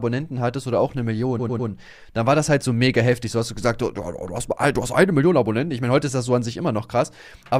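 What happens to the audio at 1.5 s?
Around 1.5 s the sound stutters: one 100 ms slice plays again three more times between 1.39 and 1.69 s. These are repeated frames, where a run of compressed frames was written more than once and replayed, stretching the audio by 300 ms.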